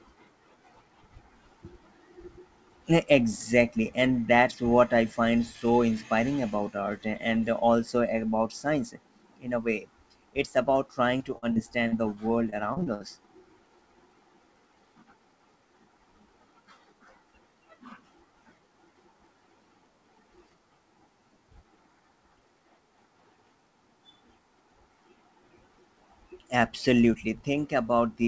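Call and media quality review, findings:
Repeated packet loss (robotic sound), 11.18–11.94 s and 12.50–13.17 s. Speech turns choppy, with pieces missing. Jitter buffer concealment stretches the last audio over several short holes, longest about 42 ms then 65 ms. Roughly a fifth, then over a quarter, of each stretch is filled-in sound. Call path band-limited to 8 kHz, consistent with G.722 at 64 kbps.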